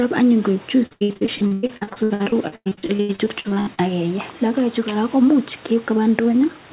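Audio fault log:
0.86–3.8 s, repeated packet loss (robotic sound): just after "koek chuis", dozens of gaps up to 100 ms are patched by repeating audio, giving choppy robotic sound; spectrogram shows smeared, striped blocks.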